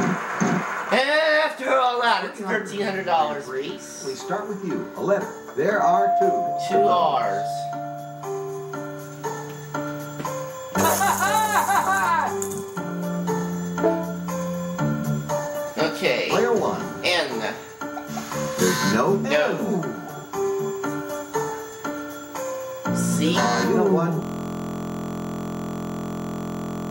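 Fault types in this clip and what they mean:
system hang loop: the system froze, so one 23.22 ms slice, fitting a 1024-sample buffer, repeats as a steady 43.1 Hz buzz from 24.22 s to the end.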